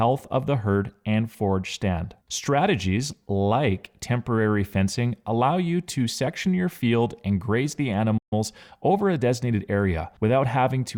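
It's a speech clip, and right after "field and graze the" the playback stall hits: the sound cuts out from 8.17 to 8.33 s, a gap of about 137 ms, most likely because the player ran dry of buffered data or had its thread held up. Straight after, from 8.33 to 9.69 s, there's time-compressed catch-up. The player trims out tiny slices and cross-fades across them to clear the backlog, so the speech runs about 1.1 times fast at unchanged pitch.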